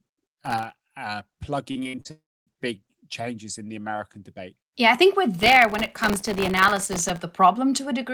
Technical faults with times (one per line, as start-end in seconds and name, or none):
0.46-0.74 processor overload crackle
1.71-2.07 repeated packet loss (robotic sound)
2.11-2.49 long network dropout
5.39-7.20 processor overload crackle